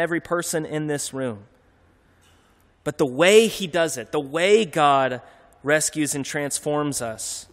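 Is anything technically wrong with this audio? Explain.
Yes. There is mains buzz in the last part of this speech clip. It starts at about 6.33 s, just after "rescues and", and runs to the end. Something like a dimmer, a rectifier or a missing shield let sharp switching spikes into the signal twice per 50 Hz cycle. Those spikes carry 50 Hz harmonics up to several kHz. The result is a steady, raspy buzz. It sits well below the speech, roughly 40 dB down.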